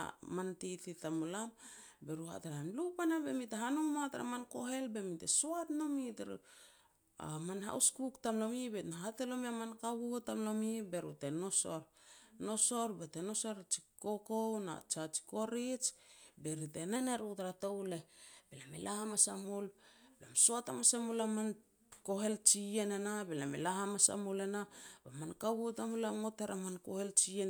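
From 16.96 s to 19.45 s, right after "be ri te", the speech runs about 5.4% fast and rises about 92 cents, just under a semitone, then snaps back to normal speed and pitch. This is most likely a drift correction step, where clock-matching software briefly changed the playback rate to rebalance its buffer. On a spectrogram the harmonic stack jumps upward by that ratio at the start and drops back down at the end. The waveform's cycles look slightly compressed across the stretch.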